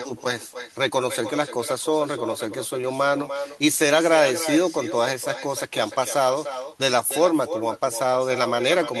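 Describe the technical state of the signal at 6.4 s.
At 6.4 s, as everywhere in the clip, there's echo with no canceller: the far end's loudspeaker feeds back into its mic and nothing removes it. So the speech gets shadowed roughly 300 ms later by a thinner copy about 10 dB down.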